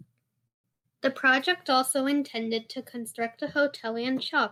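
A call audio freeze runs from 0.47 to 0.66 s: the speech halts for about 170 ms, almost all of it near-silent, then carries on where it stopped. Nothing is lost, but everything after it is delayed, which points to packets likely held up in transit until the jitter buffer ran dry.

A burst of packet loss follows at 0.72 to 0.86 s. About 120 ms of speech is gone, covered by a brief concealment fill that falls quiet within the gap. When the sound returns it has jumped ahead, so the lost stretch is missing.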